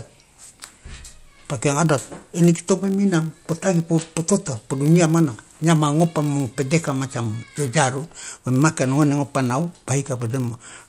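Filter restarted on every block, present throughout the speech: the filter discards its state at each block boundary and starts again from silence, leaving a small transient every time. These repeat as a 50 Hz buzz, which fits 20 ms blocks, rising and falling with the speech level.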